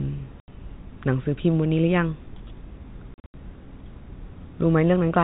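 Packets went missing and the receiver inserted silence, producing packet loss filled with silence: an 80 ms hole at 0.40 s, then 160 ms of gaps scattered across 3.14–3.34 s, the longest 80 ms, which fits 20 ms packets. Each dropout has hard edges, beneath the narrowband G.711 telephone sound.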